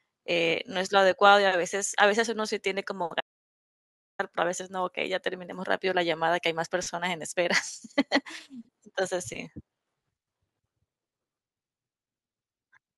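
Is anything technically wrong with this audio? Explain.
Yes. From 3.21 to 4.19 s the speech drops out to total silence for about 1 s; the input likely disconnected while zeros kept being written.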